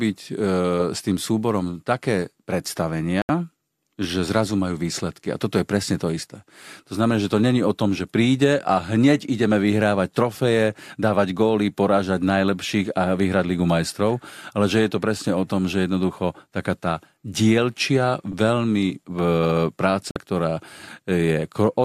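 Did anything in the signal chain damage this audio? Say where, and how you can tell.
Yes. There are two digital broadcast dropouts, a reception fault at the receiver or codec stage. The speech cuts to silence from 3.22 to 3.30 s, a hole of 72 ms. It cuts again from 20.11 to 20.16 s, losing 48 ms. The receiver muted when frames failed to decode, then unmuted on good frames. The lengths fit three and two lost frames of about 24 ms each. That audio is gone.

A repeated buffer appears at the driver or buffer stage, from 18.32 to 18.34 s. A 10 ms slice of speech plays three times in a row, the original plus two extra plays. Each repeat starts with a hard join. At this size it sounds like a click or brief buzz, not a clear stutter. New samples arrived late, so the device replayed what it held. Essentially nothing was lost. The timing is only pushed back slightly.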